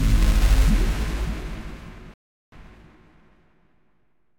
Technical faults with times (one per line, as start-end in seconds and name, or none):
2.14-2.52 rebuffering stall